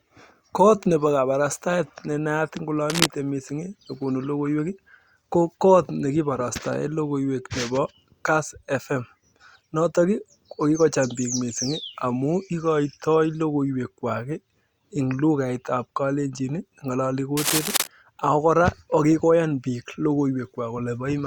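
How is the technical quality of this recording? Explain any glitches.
Two brief bursts of what is heard as cable scratch noise mar the speech, from 2.90 to 3.06 s and from 17.37 to 17.87 s, the second lasting about half a second. Each is a dense, ragged rustle roughly as loud as the voice itself. The likely cause is a worn cable or connector being moved, its contact resistance jumping erratically. Unlike a single click or a clean digital dropout, the sound is an uneven crackling texture lying over the signal.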